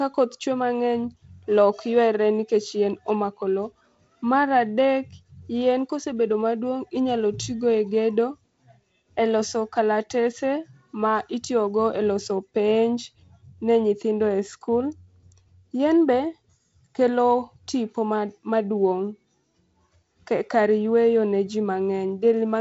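Speech, with no technical faults to report.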